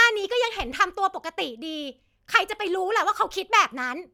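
A listener hears nothing technically wrong anywhere in this speech recording.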